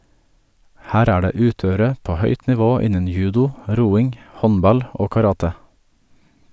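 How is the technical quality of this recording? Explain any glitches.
The recording has no glitches to explain. Nothing in the speech stands out as a technical fault at any point.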